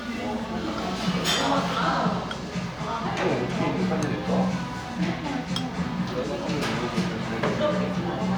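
No technical faults can be heard anywhere in this recording of sounds. There is no moment in the audio that needs a time or a description here.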